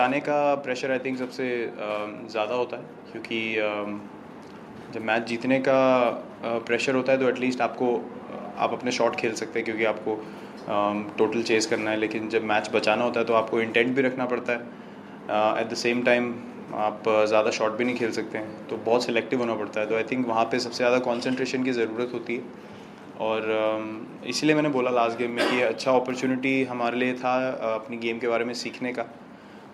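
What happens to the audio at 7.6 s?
At 7.6 s the audio plays through intact, with no dropout, click, distortion or other technical fault at that moment.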